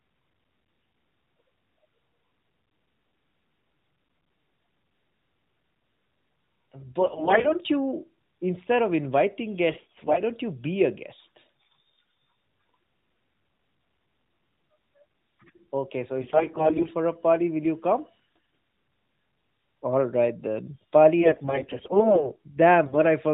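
AMR bit errors occur at 7.00–7.56 s, 9.70–10.22 s (between "instead of inviting" and "don't you be a"), 16.22–16.91 s (just before "a party will"), 18.36–18.55 s, 21.21–22.34 s (after "right then") and 22.86–22.99 s. Flipped low-priority bits in the narrowband mobile frames misplace the excitation pulses and skew the fine pitch, gain and spectral values. Pitch and level hold roughly steady, but the speech turns hoarse, scratchy and gargly.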